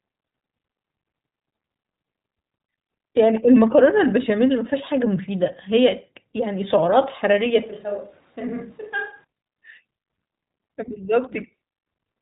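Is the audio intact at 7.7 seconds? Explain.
No. At 7.7 s the sound falls inside a switch to a distant microphone that runs from 7.63 s to 9.24 s. The change is abrupt: the speech turns roomy and hollow, loses low-end weight, and drops by roughly 10 dB. The room background rises to around 30 dB below the speech. The likely cause is that the close microphone's feed dropped out and a far pickup, such as a camera microphone, carried the recording for that stretch before cutting back just as suddenly.

The whole clip, including this moment, also carries iLBC codec damage. This narrowband VoIP codec encodes each 20 ms frame's excitation independently of the previous frame, and nothing above 3.8 kHz survives. The result is a band-limited, slightly rough, synthetic texture that is plainly audible, and the bitrate is consistent with iLBC's 15.2 kbps mode. Here it stacks with the distant-microphone colouration, so the reverberant room sound is itself coded coarsely.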